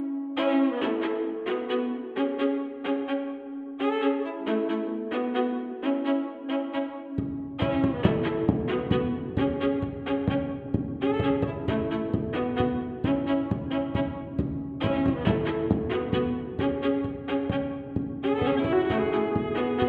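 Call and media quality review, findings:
Hollow, phasey sound across the whole clip, no dropouts. Channel delay (comb filtering): one channel lags by roughly a tenth of a millisecond, a few samples, then is summed to mono. The shared content cancels in fixed notches, the first near 5 kHz.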